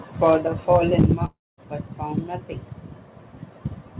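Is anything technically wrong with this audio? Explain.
Yes. The speech has three faults.

Microphone overload occurs from 0.24 to 0.34 s and again from 0.72 to 1.13 s, with peaks about 2 dB and 3 dB over full scale. The input gain was likely set too high, so the converter flattens the waveform tops on a small fraction of samples. This gives the loudest syllables a harsh, crackly edge.

Microphone volume stepped down at 1.02 s. Voice and background drop together by about 3 dB in a single step, during the second distorted stretch. This is likely the call software's automatic gain control reacting to the clipping and lowering the device input level.

A long network dropout runs from 1.25 to 1.60 s, where about 0.33 s of audio never arrives, likely because packets were lost. The receiver extends the last sound as a fading buzz or hiss for roughly 0.3 s, about 0.22 s of which ends up as silence. 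The speech then resumes with the missing portion gone.

The narrow band with nothing above 4 kHz belongs to the call path and fits G.711 mu-law at 64 kbps, not to any of these faults.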